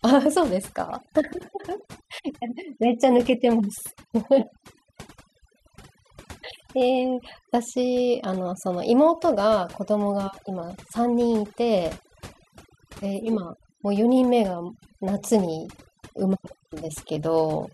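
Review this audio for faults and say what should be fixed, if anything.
Overdone noise removal runs through the whole recording: bands near the noise floor are pulled down or switched off, so pauses fall to near silence flecked with twinkling specks and quiet parts of the speech are stripped away with them. Unlike low-bitrate codec warble, the artefacts cluster where the noise was. To prevent it, set the reduction more gently and check pauses and soft passages before committing.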